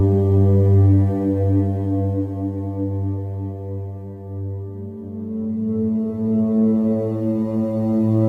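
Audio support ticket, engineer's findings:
Music clip reviewed: no audible faults found.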